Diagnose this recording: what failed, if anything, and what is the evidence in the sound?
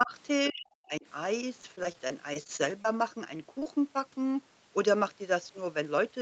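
Speech suppressed in double talk, in the call processing stage. The speech drops by about 20 dB from 0.04 to 0.13 s, then much harder, by about 40 dB, from 0.50 to 1.06 s. The likely cause is an echo canceller that could not separate this talker from loudspeaker echo while both sides spoke, so it attenuated everything.

Repeated packet loss (robotic sound), at the network and jitter-buffer stage. From 1.61 to 2.94 s the speech turns choppy, with about a dozen short holes, the longest 27 ms. Each hole is bridged by extending the previous sound, and roughly a sixth of the stretch is synthetic fill.

Short concealed packet loss, also at the network stage. Brief smears occur at 3.37–3.41 s and again at 3.59–3.67 s, where two roughly 20 ms losses fall back to back. The decoder continued the preceding sound to cover each missing piece, then crossfaded into the real audio.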